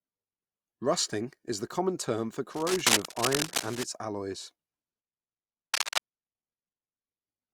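From 2.54 to 3.83 s, and again from 5.74 to 6.03 s, cable scratch noise rasps over the speech at roughly the level of the speech itself. Both bursts are most likely a worn cable or connector being moved, its contact resistance jumping about. On a spectrogram they appear as ragged broadband smears, and in the waveform as dense, spiky irregular noise riding on the signal.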